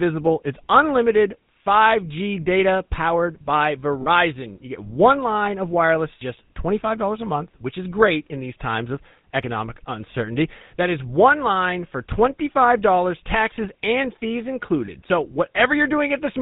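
Throughout the speech, the GSM full-rate codec damage is plainly audible. The codec rebuilds the voice from a vocal-tract model driven by a regularly spaced pulse train, so the sound takes on a buzzy, gravelly grain, and nothing above 4 kHz survives. The 13 kbps rate fits GSM full rate. Plain telephone band-limiting would dull the voice without this rasp, and the pulsed roughness is what marks this as GSM.

Lost GSM frames occur at 4.02 s, just after "data powered by", and at 14.86 s, just after "taxes and fees". At each gap the decoder repeats the parameters of the last good frame, so the sound is held as a brief, rough, metallic ring. The first gap lasts about 40 ms and the second about 20 ms, which fits two frames and one frame of 20 ms. Unlike a clean dropout or a click, these gaps are smeared over rather than silent.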